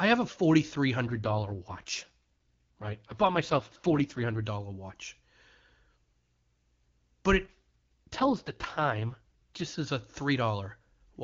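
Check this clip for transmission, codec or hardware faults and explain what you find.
Two AMR rate drops occur in this speech. AMR rate drop, 1.07 to 4.44 s (from "have a forty three" to "dollar watch") and 7.45 to 9.64 s (from "but it" to "as a"): the network pushed the AMR-WB coder to its lowest rate to spend bits on error protection. The sound fits a fall from 23.85 to 6.6 kbit/s. Bandwidth stays and nothing drops out, but speech turns rough, raspy and synthetic until the rate recovers.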